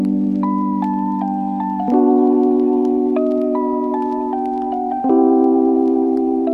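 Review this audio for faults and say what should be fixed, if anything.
Nothing needs fixing: the signal holds steady throughout, with no dropouts, level jumps, distortion or timing disturbances to correct.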